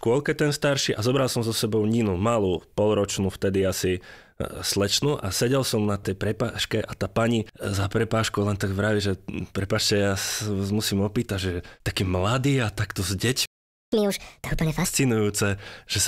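Right after "mladý a takto s", at 13.46 s, the speech cuts out mid-flow and stays silent for about 0.47 s until 13.92 s. This is a playback stall, most likely the player running out of buffered data or having its output thread blocked before it recovers.

From 13.92 s to 14.85 s the speech rushes ahead at 1.5 times normal speed and sounds noticeably higher, by roughly seven semitones, then settles back. This is catch-up at higher speed: the player resamples its backlog faster to recover the time lost in the stall.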